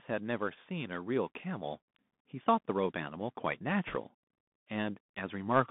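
The whole clip passes through a Bluetooth CVSD headset codec. The band runs only from about 150 Hz to 3.6 kHz, so the speech sounds thin and boxed in. The one-bit slope coder can't track fast high sounds. S sounds turn scratchy, and granular hiss sits underneath. The damage is plainly audible and fits a 64 kbps link.

From 0.06 to 1.84 s, automatic gain rises. The gain control judged the input too quiet and lifted it slowly, by about 4 dB. Speech and background swell together over nearly two seconds.

From 3.87 to 3.96 s, bit errors on a Bluetooth voice link add a brief rushing crackle. Flipped bits each nudge the signal only slightly, and the errors fade out, so there are no sharp clicks. The error rate is around one or two percent.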